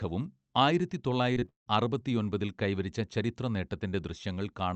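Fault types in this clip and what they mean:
Repeated packet loss (robotic sound): from 1.33 to 1.68 s the speech breaks into four gaps, the longest 170 ms, each patched by extending the previous sound. About two thirds of that stretch turns choppy, unlike a single clean dropout.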